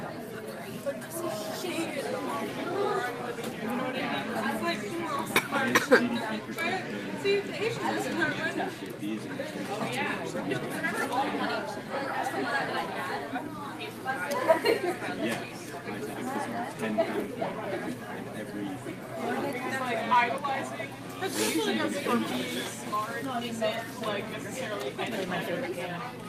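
No technical faults detected.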